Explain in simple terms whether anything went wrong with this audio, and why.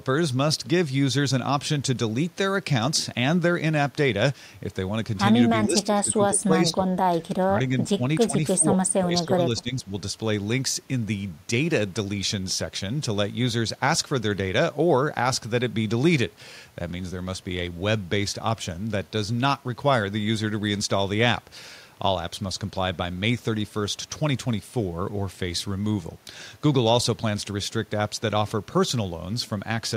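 Between 5.65 and 9.92 s the speech repeatedly sinks or breaks up: 5.65–6.95, 7.19–8.03, 8.27–8.37, 8.56–8.77 and 8.94–9.92 s. This is speech suppressed in double talk, likely an echo canceller turning this talker down while the other side spoke. Unlike network dropouts, the sound is turned down rather than vanishing abruptly.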